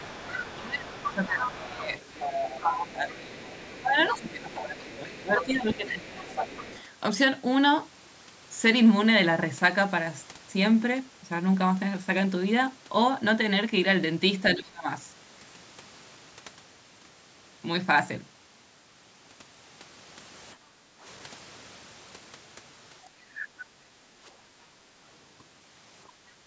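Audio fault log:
0.00–6.83 s, other side's voice leaking through: a second voice sits under the speech about 10 dB down, most likely loudspeaker echo the canceller failed to subtract. On a spectrogram it shows as a fainter, separate harmonic pattern overlapping the main voice's formants.
0.56–6.42 s and 14.55–14.87 s, speech suppressed in double talk: the talker's level sags by up to around 15 dB across roughly four seconds in the first span, then a brief dip of around 25 dB at 14.55–14.87 s. The likely cause is the canceller attenuating both voices during overlap. The waveform envelope shows sudden notches.
20.55–21.03 s, 23.05–25.04 s and 26.12–26.47 s, background gated by the echo canceller: room tone dips by about 12 dB, 10 dB and 7 dB respectively while the loudspeaker plays, then recovers when suppression releases. The spectrogram's noise floor shows darker bands across the full band up to 8 kHz, and the waveform shows the low-level floor visibly collapsing.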